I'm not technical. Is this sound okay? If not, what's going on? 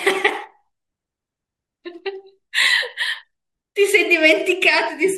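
Yes, the recording has no technical problems to point out.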